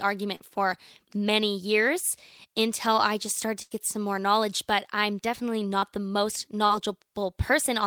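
Three brief smears break into the speech, at 0.35 to 0.42 s just before "for many years until", at 5.79 to 5.85 s between "I'm definitely" and "the most", and at 6.66 to 6.73 s. Each is a momentary wobble where the sound seems to stretch and then blend back. These are short concealed packet losses: about 40 ms of audio never arrived, and the receiver papered over the hole with roughly 30 to 40 ms of extrapolated sound before blending back into the real signal. At 3.62 to 3.74 s, after "until I just started" and before "some more knowledge", the flow stalls into a held, fading tail and then jumps ahead. That is a burst of packet loss, about 80 ms of consecutive audio lost in transit, with the receiver sustaining and fading the last sound for about 85 ms, so the section in between is simply gone.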